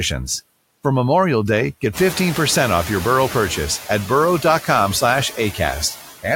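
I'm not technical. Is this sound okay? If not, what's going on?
No. Noise suppressor artifacts run through the whole speech clip: a filter keeps pushing the background noise down, so it dips in the pauses and swells under the talking. Unlike plain room noise, it pumps up and down with the voice.

There is also noise suppressor catching up from 1.93 to 3.6 s. Around 2 s the room gets noticeably noisier, and for about 1.7 s that louder noise comes through only lightly reduced before the filter adjusts and pushes it down. A sudden burst followed by a gradual fade is what sets this apart from the constant pumping.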